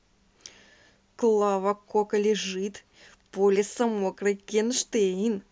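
A speech clip with one bit error spike at 3.98 s. It's a single sharp tick that stands apart from the speech around it, because a flipped bit in memory or on a digital link knocked three consecutive samples off by a power of two before they snapped back. The jump peaks at about -33 dBFS, and it's broadband and has no relation to the signal.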